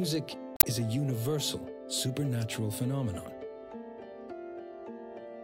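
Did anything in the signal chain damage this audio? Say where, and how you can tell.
Yes. Between 0.54 and 0.64 s, about a tenth of a second, the audio breaks into a short disturbance that points to damaged data in a compressed stream, a fault at the codec or storage stage. Corrupted or missing bytes left the decoder unable to read those frames, so it lost sync and had to search for the next valid frame header. Unlike a lone analogue click or a dropout from a stalled buffer, the corruption disrupts whole codec frames rather than single samples.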